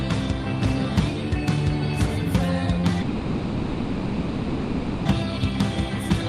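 From 3.01 to 5.08 s, a long network dropout is likely: about 2 seconds never arrived, and the receiver filled the whole gap by extending the last sound into a fading buzz or hiss with no true silence. Unlike a brief glitch, the audio resumes with the lost stretch simply gone.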